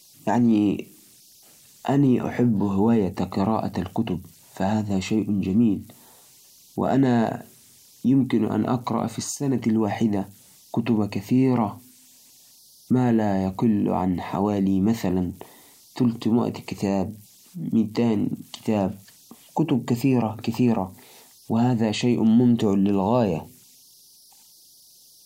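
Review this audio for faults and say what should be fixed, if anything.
Converter idle tones run throughout the speech: a whistle around 5 kHz sits about 33 dB below the signal. An undithered delta-sigma converter settles into repeating bit patterns at low input levels, producing this tone. Adding dither to the converter would prevent it.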